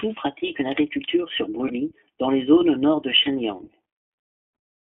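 iLBC codec throughout the speech: audio is confined to roughly 200 to 3400 Hz and sounds plainly rough and synthetic, which fits iLBC's 15.2 kbps mode with 20 ms frames.

Lost iLBC frames at 1.68 to 1.72 s, after "pratiquent une agriculture sur", and at 3.24 to 3.29 s, after "zones au nord de": the decoder repeats the last pitch cycle with noise, giving a brief buzzy held vowel before the speech recovers at once.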